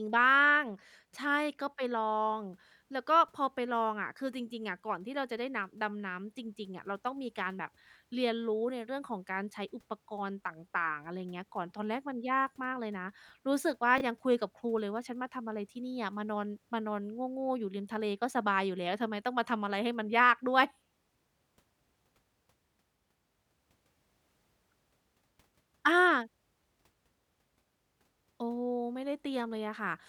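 At 13.98 to 14.01 s, a tiny garbled stutter: chunks out of order. One 10 ms chunk plays two chunks late, creating three hard joins.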